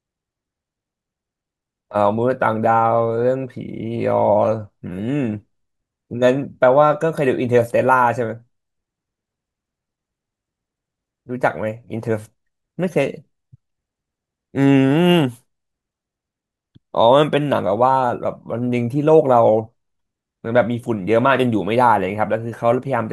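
No technical faults can be heard anywhere in the recording. Nothing in the audio calls for a timestamp or further comment.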